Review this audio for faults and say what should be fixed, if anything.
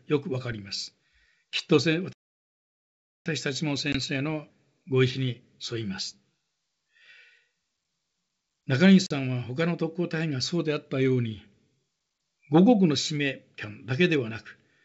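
A playback stall, likely caused by the player running out of buffered data or its output thread being blocked, cuts the sound off mid-flow from 2.13 to 3.26 s. The silence lasts about 1.13 s before the audio carries on. A deeper playout buffer and a higher-priority audio thread would prevent this.

Packet loss on the ADPCM call, which runs over G.722 wideband coding at 64 kbit/s, drops about one packet at 3.92–3.96 s (20 ms) and about two at 9.06–9.12 s (40 ms). Each hole is filled with hard-edged silence. Because the decoder's adaptive predictor and step size fall out of step with the sender's, the speech resumes with slight distortion, then settles within tens of milliseconds. Packet loss concealment that also keeps the decoder state in step would prevent this.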